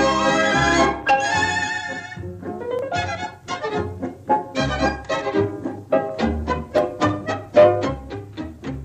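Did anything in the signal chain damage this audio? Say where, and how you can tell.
Yes. There are two tiny skips, at 2.79 s and 6.78 s, where the sound jumps forward by a few milliseconds and the two sides butt together with no silence between them. The regular 4-second spacing points to the driver or buffer stage, most likely audio missing between chunks as a recorder closes one 4-second block and opens the next. This differs from network packet loss, which strikes at irregular times, and from a dropout, which leaves an audible gap of silence.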